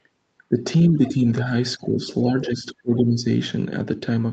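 The speech dips four times, at 0.5 to 0.57 s, 0.88 to 1.26 s, 1.77 to 2.01 s and 2.24 to 3.26 s. It sinks by about 10 dB in the first three and about 15 dB in the long last one. The likely cause is speech suppressed in double talk. The echo canceller couldn't separate the talker from the far end's echo, so it turned the talker down too.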